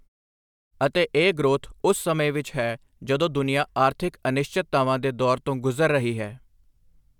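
No technical faults can be heard in the speech.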